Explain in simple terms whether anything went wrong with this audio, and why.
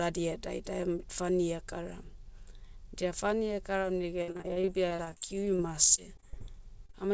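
Repeated packet loss (robotic sound) runs from 4.22 to 6.42 s. Pieces of the call kept arriving too late or not at all, over twenty times, the longest gap about 58 ms. Each hole was patched by stretching the previous sound, so about a fifth of that stretch is filler, giving a choppy, robotic quality.

A short stall from a late packet occurs from 6.86 to 6.91 s. One piece arrived late and the receiver's waiting store ran dry, so the last sound was held for 30 ms until it came. Nothing was lost, but a sound lingers briefly with a slight buzz or dip.

A short concealed packet loss follows immediately, from 6.91 to 6.95 s. About 20 ms of audio never arrived, and the gap was filled by continuing the preceding sound before blending back in, which is heard as a quick smear or wobble.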